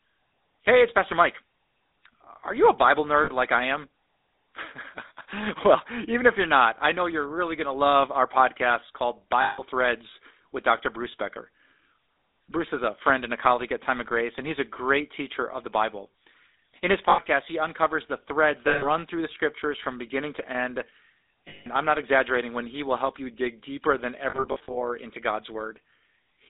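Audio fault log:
Throughout: GSM full-rate codec. The speech passes through an old 13 kbps mobile codec that models the vocal tract and drives it with a coarse, regularly spaced pulse excitation, so voiced sounds take on a plainly audible buzzy, gravelly roughness. The line band runs from 300 Hz to 3.7 kHz, which leaves the voice thin and boxy. On a spectrogram the energy stops sharply near 3.7 kHz with little below 300 Hz, and the harmonics look smeared and grainy instead of clean.
3.24 to 3.30 s: lost GSM frames. About 40 ms is lost just before "like I am". The decoder repeats the last good frame, so a brief rough, metallic ring replaces the speech there. On the waveform the envelope flattens into a short repeating texture, and the spectrogram shows a frozen smear.
9.42 to 9.64 s: lost GSM frames. About 160 ms goes missing right after "love our podcast called". The held frame rings metallically over the gap before speech returns. 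The spectrogram shows a frozen spectral band, and then speech resumes abruptly.
17.10 to 17.20 s: lost GSM frames. An 80 ms loss leaves a brief metallic buzz in place of the speech, seen as a short stretch of static, repeating spectrum.
18.68 to 18.86 s and 21.48 to 21.66 s: lost GSM frames. These gaps of 140 ms and 180 ms each ring metallically. On the spectrogram each appears as a frozen block, and the waveform shows a flattened, repeating envelope.
24.30 to 24.75 s: lost GSM frames. After "you dig deeper than", losses totalling about 240 ms are scattered across roughly 440 ms in short runs of a few tens of milliseconds. The sound stutters with repeated metallic flickers, seen as a chopped patchwork of frozen slivers on the spectrogram.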